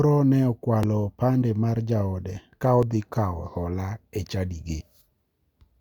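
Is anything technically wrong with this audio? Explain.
Yes. This speech has two brief discontinuities from overlap between stream segments, at 0.83 s, just before "opande mar jaode ka", and at 2.83 s, between "opande mar jaode ka" and "kawo hola e". They fall 2 s apart, matching the 2.0 s segment length. Adjacent segments' timestamps overlapped, so the player discarded roughly 13 ms of audio that was not actually duplicated. The waveform jumps across the gap, heard as a small click or skip.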